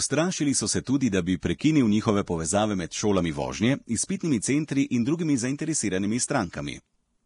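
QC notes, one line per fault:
Throughout, Vorbis compression: speech sounds hissy and grainy, with nothing above 10.6 kHz. Treble detail turned to noise, likely from a heavy encode near 32 kbps.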